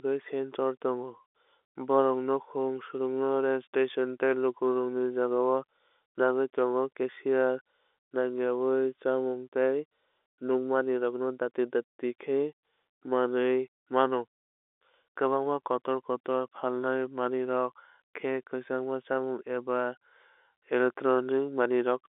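There are no technical faults to describe at any point in the clip.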